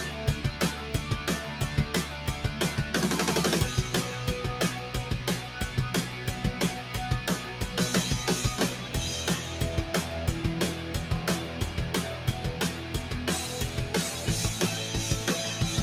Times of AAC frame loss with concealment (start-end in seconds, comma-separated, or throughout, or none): none